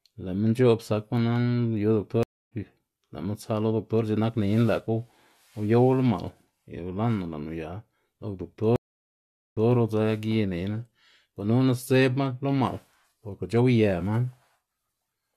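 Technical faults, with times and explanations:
2.23–2.52 s and 8.76–9.72 s, stream reconnect: the connection dropped and the player restarted a fresh decoder mid-stream. The speech stops dead for about 0.28 s and later about 0.8 s. The first gap resumes roughly 0.3 s further on, skipping material. The second resumes 0.16 s earlier, repeating a short stretch. On a waveform each gap is a flat line with a soft ramp back in. On a spectrogram it is a blank vertical band.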